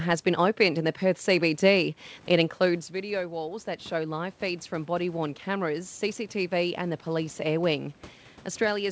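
At 2.93 s, shortly after the talker drops about 11 dB, apparently moving away from the microphone around 2.5 s, automatic gain rising begins. The gain control judges the input too quiet and climbs about 6 dB until 7.76 s, so the speech and the room noise swell together. On the waveform, the envelope and the noise floor between phrases widen steadily. On the spectrogram, which has nothing above 8 kHz, all bands brighten together.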